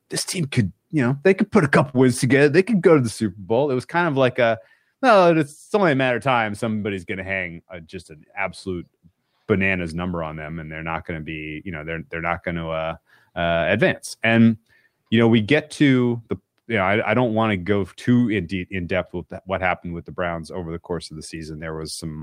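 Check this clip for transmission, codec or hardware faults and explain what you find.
There's one fault here, a short concealed packet loss at about 1.89 to 1.96 s, between "they could put a" and "wins together". Roughly 40 ms of the speech never arrived in time, so the receiver papered over the gap with about 43 ms of synthesized sound, extending what it last had and then crossfading back into the real signal. You hear it as a quick smear right at that join, and a short sound there can get swallowed.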